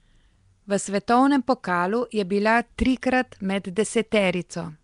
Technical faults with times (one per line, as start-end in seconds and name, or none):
0.00-4.83 Nellymoser compression